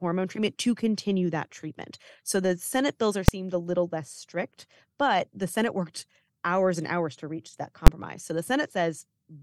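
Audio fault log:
3.28 s and 7.87 s, invalid numbers at full scale: both are sharp bangs, one just after "bills are" and one just after "hours to reach that". A calculation blew up into infinite or invalid values, which became the largest positive or negative value, so the output sat pinned at one extreme value, far beyond the audio's peaks, for a whole processing block. The first lasts about 2.9 ms, which fits a 128-sample block. The second lasts about 11.6 ms, which fits a 512-sample block. Both are too short to hear as separate start and end pops, so each one lands as a single loud crack.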